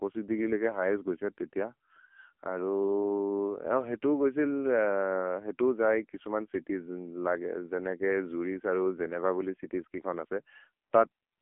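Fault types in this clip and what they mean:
AMR narrowband mobile codec: the speech has been through the old 2G/3G phone codec, which samples at 8 kHz and rebuilds the voice from a vocal-tract model driven by 2 to 10 pulses in each 5 ms. The damage here is heavy. The voice comes out buzzy and synthetic, which fits one of the lower modes, around 6.7 kbps. The band is squeezed to about 250 Hz to 3.4 kHz, with nothing at all above 4 kHz.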